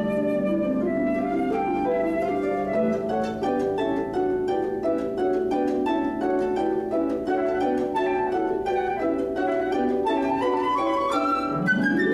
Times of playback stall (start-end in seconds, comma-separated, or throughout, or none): none